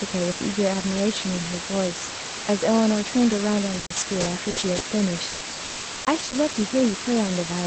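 Right from the start and all the way through, there's low bit depth with dither: a steady, even hiss sitting about as loud as the speech itself, with no crunchy distortion. The dither randomises the rounding error so it turns into flat white noise instead of grainy artefacts. A floor that high fits a signal reduced to about 3 bits. The audio also sounds band-limited to roughly 8 kHz, in line with an Opus call codec.

From 3.79 to 6.37 s, repeated packet loss gives the speech a choppy, robotic quality. There are seven gaps, the longest about 180 ms. Each one is patched by stretching out the last bit of sound, so you get choppy fragments. Roughly 590 ms gets filled that way, about 23% of that stretch, and another 540 ms simply drops out.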